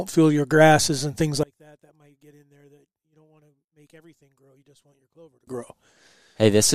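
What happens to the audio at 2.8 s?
One stereo channel has likely been inverted in polarity, so when the two channels combine the shared centre content cancels. From 1.43 s to 5.47 s, just after "your grasses and things", the speech drops by about 31 dB, leaving only a faint residue.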